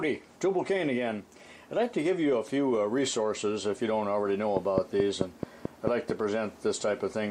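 Train of clicks, 4.57–6.11 s: about seven regular pops at 4.6 per second, well above the sound, likely interference or a faulty connection or supply.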